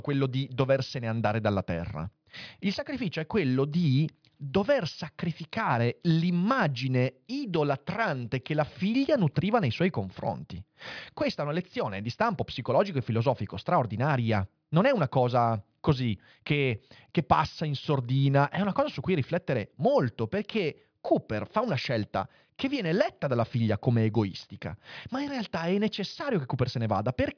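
Listening to the recording from beginning to end, nothing stood out as a technical fault at any point.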